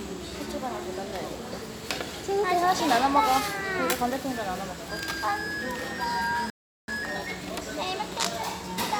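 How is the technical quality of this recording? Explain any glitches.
Two linked glitches mar the playback near the end.

From 6.50 to 6.88 s the sound cuts to silence for about 380 ms, then resumes: a playback stall, likely the player running short of data or its thread being blocked.

From 6.88 to 7.62 s the audio plays hurried at about 1.5 times speed, pitch unchanged: time-compressed catch-up, trimming the backlog by splicing out small cross-faded pieces.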